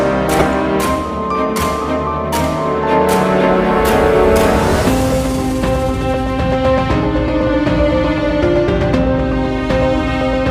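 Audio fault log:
0.39–0.49 s and 7.47 s, DAB burbling: brief blips of noise over the sound. Weak reception lets a small fraction of a percent of bit errors slip past error correction, so corrupted MP2 samples put short noise blips in single sub-bands and corrupted scale factors make sub-bands jump in level for up to a frame. This fits about six damaged frames, then five.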